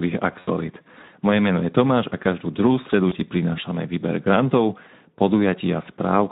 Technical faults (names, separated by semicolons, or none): Speex codec; VoIP packet loss concealed by the speech codec